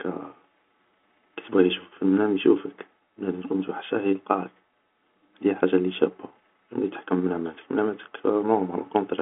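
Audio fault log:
No audible faults found.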